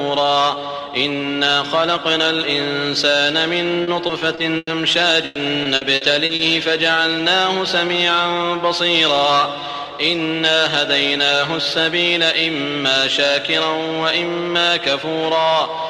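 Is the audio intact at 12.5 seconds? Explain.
Yes, at 12.5 seconds the audio plays through intact, with no dropout, click, distortion or other fault at that moment.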